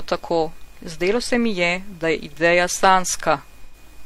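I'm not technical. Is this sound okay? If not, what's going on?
No. Near the end of this speech clip, from about 3.65 to 3.75 s, the sound briefly turns smeared and hissy. That is AAC frame loss with concealment. A tiny piece of the compressed audio, about 85 milliseconds, which fits two lost frames, went missing, and the player patched the hole by guessing from the sound just before it. Unlike a plain dropout, there's no silent gap or click, just a short fuzzy blur where real sound should be.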